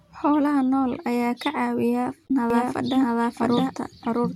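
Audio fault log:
2.25–2.30 s: damaged data in a compressed stream. A brief glitch. Corrupted frames break decoding until the decoder resyncs on the next header.
2.50 s to end: doubled audio track. A second, equally loud full-band copy starts abruptly, trailing about 0.7 s behind. It is likely a second capture path or an out-of-step edit.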